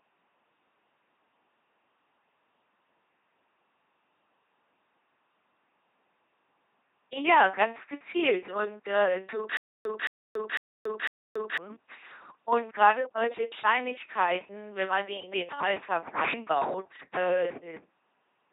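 It's a speech clip run through an LPC-10 vocoder the whole way, and it's heavily damaged. Every moment gets rendered as either pure buzz or pure hiss through a simple filter, so the voice comes out robotic and mechanical, with nothing above about 3.8 kHz. From 9.57 to 11.58 s there's a stutter with silent gaps: a 220 ms burst repeats four times, each followed by 281 ms of dead digital silence, on a steady half-second cycle. That's likely a stalled player replaying its last fragment, and the audio that should have filled that stretch is gone.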